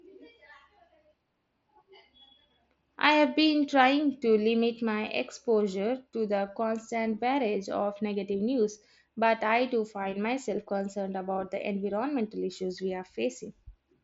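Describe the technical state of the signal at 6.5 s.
At 6.5 s the speech is intact, carried by the wideband mSBC Bluetooth headset codec with its content stopping near 7.7 kHz and only the light grain that codec leaves on louder sounds.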